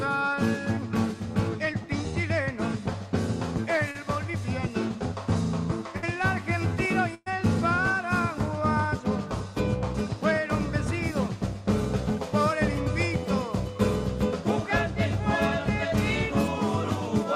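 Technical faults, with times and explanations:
3.91–3.97 s, short concealed packet loss: about 40 ms of audio arrived too late for the decoder, which extended the preceding sound to bridge the gap, leaving a brief smear.
5.97–6.04 s and 7.14–7.28 s, burst of packet loss: runs of packets went missing (60 ms, then 120 ms). The receiver stretched and faded the last sound, producing a held buzz or dying hiss. The second gap ends with about 10 ms of silence before the audio resumes further on.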